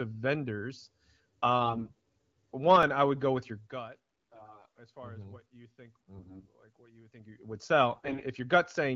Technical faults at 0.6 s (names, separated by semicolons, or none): none